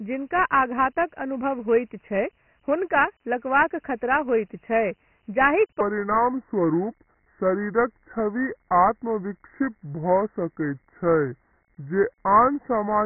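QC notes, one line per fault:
Throughout: Dialogic VOX ADPCM. The band stops at 3 kHz, leaving the speech boxed-in and telephone-like. The heavy codec damage shows as a gritty hiss riding on the speech, because each sample is coarsely quantised to 4 bits and the step size has to keep chasing the signal. The narrow band and the roughly 24 kbps character fit 4-bit ADPCM running at 6,000 samples a second, as in phone-menu and voicemail storage.
5.81 s to 13.06 s: section at the wrong speed. From 5.81 s to the end, the audio plays at 0.733 times its original rate, so the speech drags and drops about five semitones in pitch, turning deep and slow. Speed and pitch shift together at that moment, which is the mark of resampling rather than of time-stretching. The likely cause is that an editor or player fitted this part to the wrong clock.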